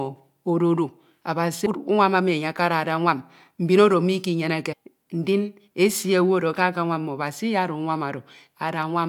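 A jump at 1.65 s where about a fifth of a second of speech vanishes, and another at 4.72 to 4.74 s, just before "ndin esi", drops roughly 0.4 s. These are compressed frames skipped: around ten and fifteen 23.2 ms frames never played.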